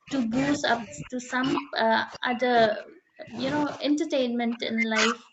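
An echo canceller that likely could not tell the near talker from loudspeaker echo while both sides spoke at once has produced speech suppressed in double talk across almost the whole speech clip: 0.00–0.34 s, 0.56–3.41 s and 3.64–5.33 s. Through these spans the voice is pushed down by as much as about 40 dB, sinking or dropping out in pieces. The sound stays within a band ending near 8 kHz, consistent with an Opus call path.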